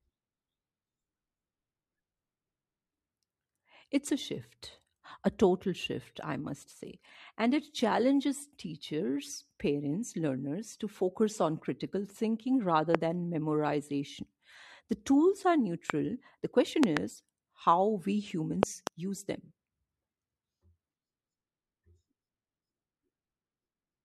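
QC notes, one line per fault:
12.95–12.97, 15.90–15.92, 16.83–16.99 and 18.63–18.89 s, loud pop: single pops after "on critical thinking rather" and "tools are", then double pops, the last before "use them", rising far above the speech, which continues underneath. Likely a voltage pulse from a plug, switch or static. Waveform shows tall isolated spikes, and the spectrogram shows thin full-height vertical lines.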